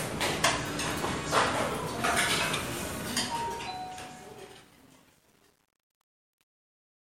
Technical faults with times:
2.84-7.11 truncation distortion on a fade

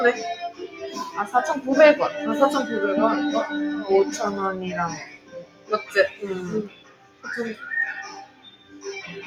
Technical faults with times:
0.00-9.27 noise suppressor applied to music or sounds
0.50-0.82 sound cut by the noise suppressor
4.94-5.93 sound cut by the noise suppressor
6.67-7.25 sound cut by the noise suppressor
8.25-8.85 sound cut by the noise suppressor

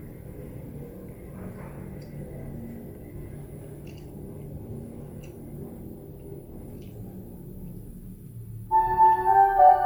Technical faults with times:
0.00-9.86 Bluetooth LC3 compression

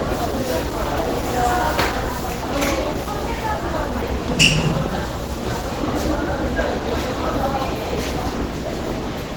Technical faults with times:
0.00-9.37 Opus compression

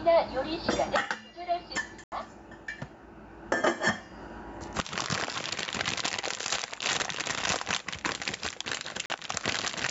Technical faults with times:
0.00-9.90 gain pumping
2.04-2.12 Bluetooth dropout
9.06-9.10 Bluetooth dropout

